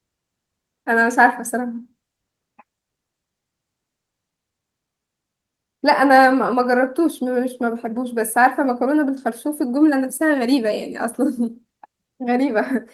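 Nothing in the speech stood out as a technical problem on listening.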